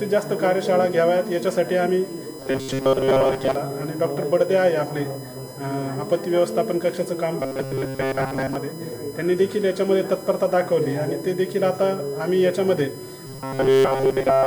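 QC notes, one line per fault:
Throughout: USB whine. A steady, fixed-pitch tone sits under the whole clip, based at 1 kHz and loudest at its fifth harmonic, 5 kHz, about 25 dB below the signal. The 1 kHz spacing matches the USB bus's 1 ms frame timing. Current drawn in step with each frame leaks into the audio through the power or ground path. The pulses are not pure sine waves, so their energy spreads into harmonics.
2.39–3.55 s, 7.40–8.55 s, 13.27 s to the end: robotic sound from repeated short buffers. In each stretch the sound turns into a rigid, metallic buzz at 134 Hz that only loosely follows the underlying audio. The likely cause is new audio arriving too seldom, so the same short chunk of about 7.5 ms is played over and over. Most of the real audio in these stretches is skipped. That steady repetition imposes its own pitch, one over the chunk length.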